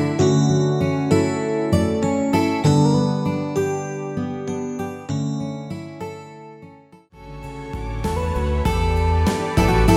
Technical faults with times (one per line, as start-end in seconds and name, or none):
none